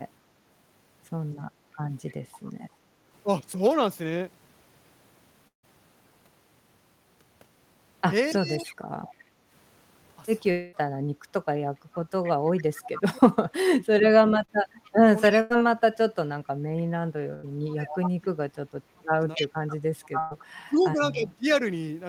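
Speech runs through the whole recording, and a far-end echo leak shows up three times, each trailing the talker by about 0.28 s. It is faint at 2.08 to 2.5 s (about 30 dB under the speech), a brief scrap at 8.31 to 8.36 s (about 20 dB down), and sustained from 11.94 to 21.16 s at only about 10 dB below. This is likely a loudspeaker-side echo canceller passing part of its microphone pickup back down the line. On a spectrogram it appears as a weaker, time-shifted copy of the speech harmonics sitting behind the originals. The room background is gated by the echo canceller at 2.8 to 3.05 s and 9.2 to 9.5 s. The noise floor dips by about 6 dB and then about 7 dB for a couple of tenths of a second each time, then recovers. That is the canceller clamping the microphone while the loudspeaker plays. A waveform shows a small notch in the floor between phrases, and a spectrogram shows a brief lighter band across the background noise. 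Two long network dropouts occur, likely from the stream stalling. At 5.47 to 5.65 s, 160 ms of audio is lost; the receiver extends the last sound as a fading buzz that ends in near-silence. At 10.51 to 10.75 s, 220 ms goes missing, and the concealment fills the whole gap with a held tone that never goes fully quiet. On a spectrogram these look like smeared, frozen harmonics. In the waveform the first dropout thins to a flat stretch. Speech is suppressed in double talk across 8.34 to 21.46 s, likely because the echo canceller could not tell the local talker from the loudspeaker return and turned both down. The result is about 5 s in total of dips and cut-outs, as deep as about 30 dB. These show as sudden troughs in the waveform envelope and as high frequencies vanishing from the spectrogram in patches. A short concealed packet loss at 14.45 to 14.51 s removes 40 ms, leaving a quick smear where the decoder bridged the hole from the preceding sound. 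It shows as a thin blurred slice in the spectrogram with a slight seam in the waveform. Bursts of packet loss hit at 15.41 to 15.6 s and 17.34 to 17.45 s, about 100 ms each, and at 20.19 to 20.33 s, about 120 ms. In each, the receiver stretches the last sound into a buzz or hiss that fades, then resumes with that section gone. Each burst leaves a short horizontal streak of frozen energy on a spectrogram and a decaying envelope in the waveform before normal speech picks up again.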